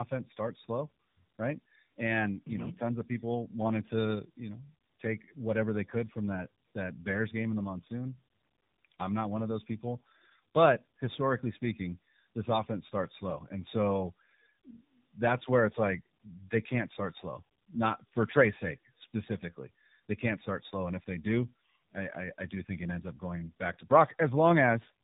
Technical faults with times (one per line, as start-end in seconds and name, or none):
0.00-25.04 tandem speech coding